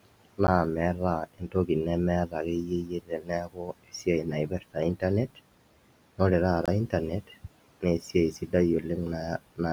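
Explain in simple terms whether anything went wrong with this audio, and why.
Several things went wrong. Noise suppressor artifacts run through the whole speech clip: the filter pushes the room noise down between phrases and lets it back under them, leaving a pumping background.

A block of digital silence cuts the sound to nothing at 0.47 s for about 11 ms, which fits a 512-sample buffer arriving late. A second block at 6.66 to 6.68 s lasts about 21 ms. Each gap starts and stops abruptly, so it is heard as a tick or brief dropout.

Speech cut by the noise suppressor occurs at 1.26 to 1.69 s, 2.66 to 4.07 s, 4.49 to 4.77 s, and 8.32 to 8.54 s, just after "naa esiai". The filter mistook quiet parts of speech for noise and turned them down, so some sounds come out faint or swallowed. The longest stretch is around 3 s, where roughly three quarters of a second is affected.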